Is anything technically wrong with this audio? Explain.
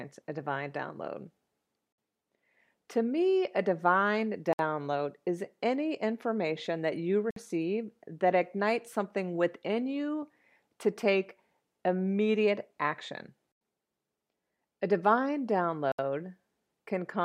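Yes. The speech drops to silence four times, at 1.92, 4.53, 7.31 and 15.92 s, for 57 to 70 ms each. This is likely a Bluetooth stall: the buffer ran dry while delayed packets were resent, and playback then resumed.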